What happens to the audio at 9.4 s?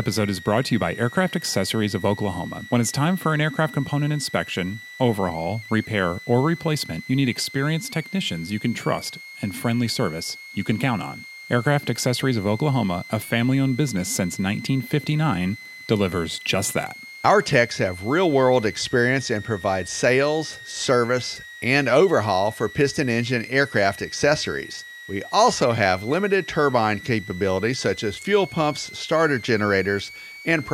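At 9.4 s a switching supply whistle sits under the speech, as it does for the whole clip. A power supply is switching in an audible burst mode or beating with another one. It gives a high whistle near 2 kHz, wandering between 1.86 and 2.29 kHz, roughly 20 dB below the speech.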